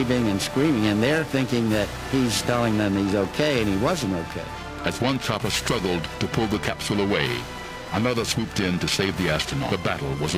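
Periodic clock jitter runs through the whole clip: interference at around 1 kHz is wobbling the converter's sample clock, so each component of the audio carries sidebands spaced roughly 1 kHz either side. The result is a rough, metallic edge, strongest on higher content and gone whenever the sound falls silent.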